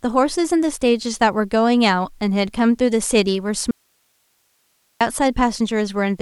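A speech recording with an audio dropout to a faint residue from 3.71 s to 5.01 s: the signal cuts out abruptly mid-flow for about 1.3 s, leaving only hiss roughly 45 dB below the speech, then snaps back. The likely cause is a momentary loss of the source while the downstream path stayed live. On a waveform the envelope collapses to a thin noise band with vertical edges; a spectrogram shows speech harmonics vanishing into a uniform broadband hiss floor.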